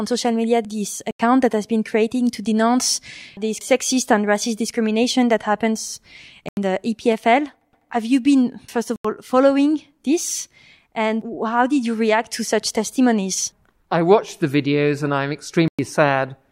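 At 1.11, 6.49 and 8.96 s the speech drops into a block of digital silence for about 85 ms, which fits a missed 4096-sample buffer, then again at 15.68 s for about 107 ms. Each hard cut leaves a short hole.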